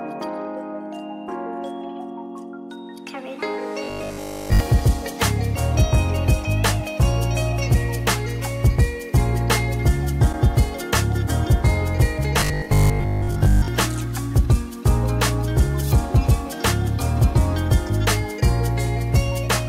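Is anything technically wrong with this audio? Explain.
Yes. Robotic sound from repeated short buffers appears at 3.84–4.60 s and 12.40–13.68 s, likely caused by late audio being padded by looping the last 20 ms, skipping most of the real signal and imposing a rigid 50 Hz metallic buzz.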